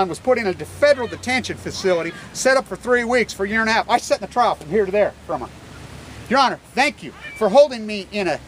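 Nothing stood out as a technical fault anywhere in the recording.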